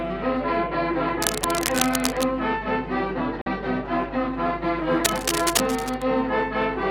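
Cable scratch noise runs from 1.21 to 2.24 s: dense, uneven rustling, only a few dB below the sound, likely from a worn connector whose contact resistance fluctuates as it moves. A Bluetooth dropout at 3.41 to 3.48 s cuts the audio for about 46 ms, likely packets arriving too late, which fits two lost frames, before the sound resumes as though it had kept playing. The same cable scratch noise returns from 5.04 to 6.02 s at a similar level.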